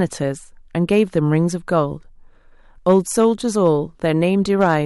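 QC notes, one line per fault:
2.89–3.25 s, 3.65–3.68 s and 4.61–4.77 s, hard clipping: the speech peaks push past the ceiling of a stage in the chain, by about 3 dB in the first and last spans and about 1 dB in the brief middle one, so the waveform tops are sheared flat. Those squared-off peaks add harmonics high in the spectrum, heard as crackly, gritty edges on the loudest syllables, strongest in the longer 3 dB spans.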